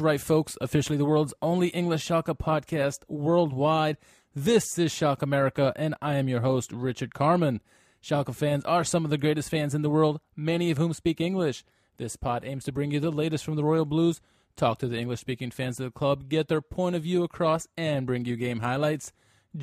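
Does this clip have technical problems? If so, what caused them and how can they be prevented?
No, the speech in this clip has no technical faults. Since nothing went wrong, there is no cause to trace and nothing to prevent.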